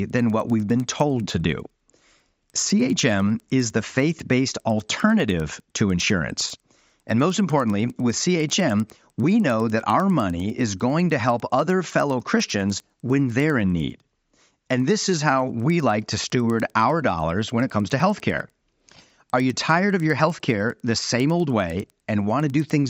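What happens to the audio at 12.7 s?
At 12.7 s the speech carries ticks every 100 ms, a 10 Hz pattern from a resampler restarted on every block, leaving small errors at each block edge throughout.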